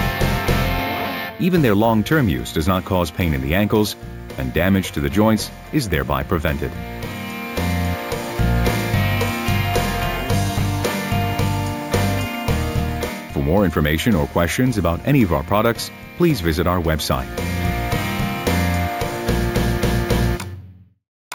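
Throughout, there's imaging from sample-and-hold upsampling: each 16 kHz sample was simply repeated up to 48 kHz, leaving mirrored images at 8 to 16 kHz, about 20 dB down, heard as metallic fizz.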